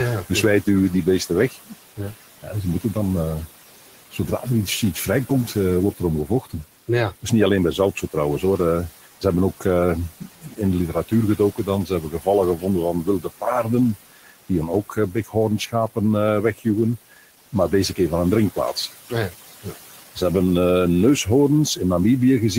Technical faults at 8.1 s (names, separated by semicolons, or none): noise suppressor artifacts; speech cut by the noise suppressor